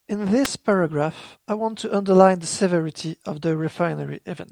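At about 0.45 s there's a sharp little snap sitting on top of the speech, peaking around -5 dBFS and gone almost instantly. That's an electrical switching spike, likely a nearby switch or motor arcing briefly and the audio line picking up the burst.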